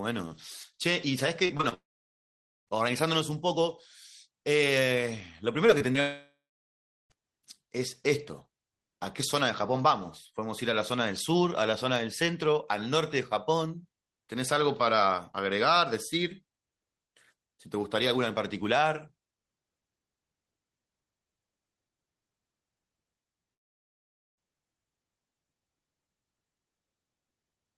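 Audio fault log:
1.45–1.74 s, repeated packet loss (robotic sound): four gaps in under 0.3 s, the longest 36 ms, with about a third of the span made up of patched sound. Each hole is filled by stretching the last bit of speech before real audio resumes, and the next hole arrives almost at once, so the speech turns choppy and mechanical. Unlike a single short loss, the repeats give the stretch a buzzy, robotic texture rather than one isolated blip.
1.74–2.69 s, long network dropout: right after the choppy stretch, nearly a second of speech goes missing. The last sound is carried on briefly and fades, leaving about 0.86 s of silence before speech returns with that portion simply absent. The cause is likely a break in incoming audio, not a local glitch. What separates it from packet loss is the length: the filler gives up and a clear hole in the speech remains.
5.67 s, 5.78 s and 5.92 s, short concealed packet loss: three 20 ms holes roughly a tenth of a second apart, each patched by continuing the preceding sound and blending back into the real audio. 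They come across as small smears or wobbles in the speech, and a brief consonant may drop out. Because each is tiny and followed by real audio, there is no sustained robotic quality as in the repeated loss at 1.45 s.
6.01–7.12 s, long network dropout: just after those small losses, about 1.1 s of speech is lost, likely because audio stopped arriving. The continued sound fades out, and roughly 0.75 s of silence follows before speech picks up again without the missing part. The length and the plain silence set it apart from the brief, patched losses just before it.
23.54–24.39 s, long network dropout: about 0.84 s of speech is missing, and nearly all of it is heard as silence, with almost no audible carry-over of the last sound. Likely another break in incoming audio. When speech resumes, the lost section is simply gone, which distinguishes it from short concealed losses where the gap is hidden under patched sound.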